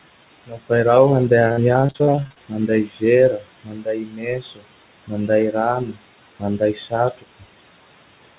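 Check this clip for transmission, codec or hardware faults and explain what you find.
Three kinds of fault are present: noise suppressor artifacts across the whole clip, repeated packet loss with a robotic sound in one stretch, and speech cut by the noise suppressor at eight points.

Noise suppressor artifacts run from start to finish. The suppressor estimates the steady background and pushes down each frequency band it judges to be noise, frame by frame, by about 20 dB here. The room noise, sitting roughly 13 dB below the speech, therefore dips away in pauses and swells back under each phrase.

Repeated packet loss (robotic sound) occurs from 1.48 to 2.39 s. Audio packets kept arriving late or not at all, and the receiver patched each hole by extending the last sound before fetching the next real packet. Roughly a dozen short gaps follow one another, the longest 52 ms, and concealment covers about 37% of that stretch. 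The speech turns choppy, with small pieces simply missing.

Speech cut by the noise suppressor occurs at 0.46–0.71 s (just before "i raho"), 2.49–3.03 s, 3.38–3.48 s, 3.64–4.66 s, 5.07–5.30 s, 5.80–6.01 s, 6.39–6.93 s and 7.10–7.43 s. At these points the suppressor mistook quiet parts of the speech for background and turned them down with it, by about 15 to 22 dB at the deepest. Soft consonants and word endings sound swallowed, and the long stretch from 3.64 to 4.66 s goes faint.

The call path itself has nothing above 4 kHz, which points to G.711 mu-law at 64 kbps.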